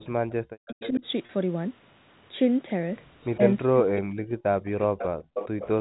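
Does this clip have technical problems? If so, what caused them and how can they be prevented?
Yes. The echo canceller gated the background from 0.00 to 0.29 s, pulling the room sound down by about 39 dB for roughly a fifth of a second before letting it back in. Prevention: use gentler suppression with comfort noise so the background stays steady.

An echo leak, likely from a loudspeaker-side canceller that didn't fully converge, sends back a copy of the talker delayed by 391 to 409 ms. It appears at 0.67–1.0 s (about 15 dB under the speech), 3.22–3.36 s (about 35 dB under), 4.98–5.07 s (about 10 dB under) and 5.34–5.69 s (only about 5 dB under). Prevention: use a headset, or lower the loudspeaker volume so the canceller can track the echo path.

Speech suppressed in double talk here likely came from the canceller mistaking overlapping talk for echo and turning the talker down. The voice drops by roughly 40 dB at 0.67–1.04 s, by about 10 dB at 3.37–3.42 s, and for about a second across 3.67–5.1 s. 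Prevention: use a canceller with reliable double-talk detection, and avoid speaking over the far side.

Packet loss with pitch repetition occurs at 1.26 s. About 30 ms went missing, which fits a single lost packet, and the receiver repeated the last pitch period, leaving a brief buzzy hold. Prevention: use a more stable network connection or forward error correction.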